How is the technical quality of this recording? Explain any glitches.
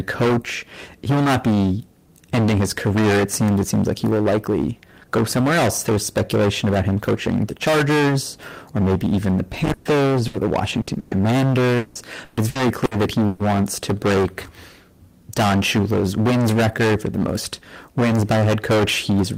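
Quality is poor: the speech is heavily distorted throughout, with several dropouts and a choppy stretch between 9.7 and 13.4 s.

Hard clipping runs the whole length. The signal is driven about 21 dB past full scale, so roughly a third of samples are flattened, giving a harsh fuzz on every loud sound.

A burst of packet loss occurs at 9.73–9.88 s, 10.27–10.36 s, 10.81–10.90 s and 10.99–11.14 s. The receiver stretched the last sound over each gap (120, 60, 60 and 120 ms), heard as a held buzz or fading hiss before speech resumes with that span missing.

Repeated packet loss (robotic sound) affects 11.77–13.42 s. Five gaps, the longest 180 ms, are patched by extending prior audio, concealing about a third of the stretch and producing choppy speech.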